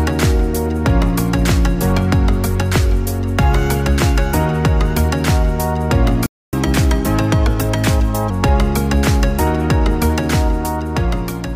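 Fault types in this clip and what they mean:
Playback stall: From 6.26 to 6.53 s the sound cuts out mid-flow and the output falls silent for about 0.27 s before it picks up again. The gap is too long to be a simple dropout click. The likely cause is that the player's buffer ran dry or its output thread was held up, so no new samples reached the device until it recovered and resumed feeding audio.
Catch-up at higher speed: From 6.53 to 8.30 s, right after the gap, the sound runs at 1.15 times normal speed, and its pitch rises by about two semitones. The player is resampling its queued backlog faster to recover the time lost in the stall. Once that backlog is cleared at 8.30 s, both speed and pitch drop back to normal.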